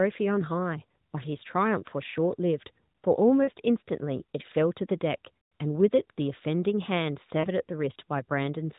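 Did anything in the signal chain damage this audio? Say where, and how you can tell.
Yes: lost AMR speech frames on the radio link. There are brief warbles at 3.44 and 7.40 s, and a longer, fading smear at 5.44 s while the decoder extrapolates.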